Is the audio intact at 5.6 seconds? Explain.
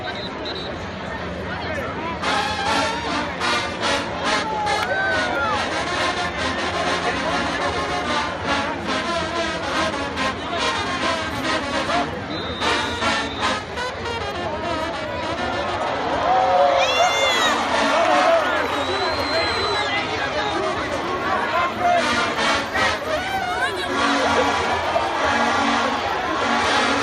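Yes, the audio is intact at 5.6 seconds, with no dropout, click, distortion or other fault audible at that moment.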